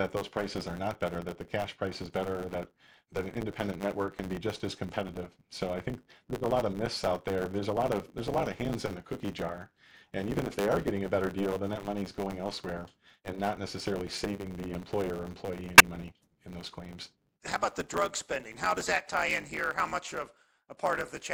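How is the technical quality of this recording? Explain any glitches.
The recording has three technical faults: constant compression damage, a steady buzz with sped-up delivery, and one brief glitch.

Throughout, the speech sounds watery and swirly with dulled treble, likely from low-bitrate MP3 compression starving weak frequency lines so they flicker between frames.

Also throughout, a block size mismatch (truncated) drops the tail of every block, which fits 512-sample blocks being cut short. The result is a 100 Hz buzz and speech running 1.16 times fast.

From 15.78 to 15.81 s, between "or employee" and "money in those claims", a corrupt frame was decoded anyway. Its damaged data put energy at wrong frequencies, producing a short chirp, squeak, blip or burst of noise.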